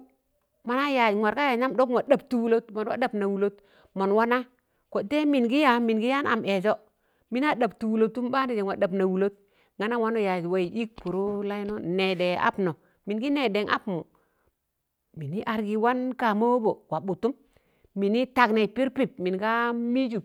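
At 2.07 s there is a single sharp tick in the speech, too brief to register as a gap. It is a block of digital silence about 2.7 ms long, which fits a 128-sample block. For that instant the output dropped straight to zero and then jumped back with no fade. The abrupt steps at both edges are what produce the click. A block that short sounds like a tick, not a hole.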